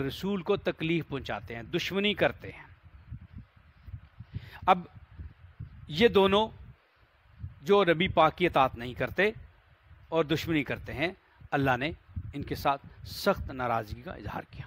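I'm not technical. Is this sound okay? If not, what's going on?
Yes, this sound is fine, with nothing going wrong anywhere in it.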